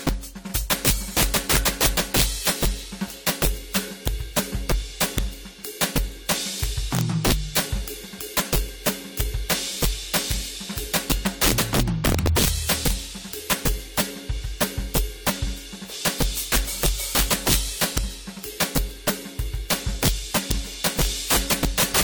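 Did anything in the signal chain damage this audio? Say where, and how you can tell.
Yes. Integer overflow, at the sample-format conversion stage, runs through the whole music clip. A gain pushing peaks about 14 dB over full scale wraps roughly one sample in twenty to the opposite sign, giving violent cracks on loud passages. A waveform shows peaks snapping from top rail to bottom, not flat-topped clipping.

Generation loss is at the codec stage. The smeared, swirly, hollow texture and blurred attacks point to repeated lossy encoding, likely around three passes of AAC-LC at 64 kbit/s. A spectrogram would show accumulated holes and patchy, washed-out high bands below 20.1 kHz.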